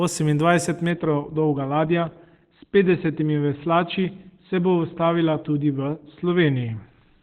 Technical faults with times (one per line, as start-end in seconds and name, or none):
0.90-7.23 adaptive stream at a lower bitrate